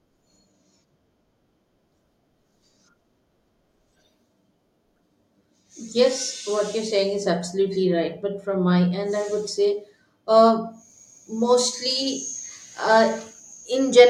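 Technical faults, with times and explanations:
Nothing technical goes wrong anywhere in this bit of speech, so there's nothing to flag here.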